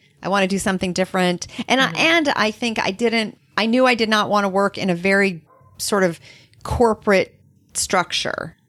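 No technical faults are audible anywhere in the recording.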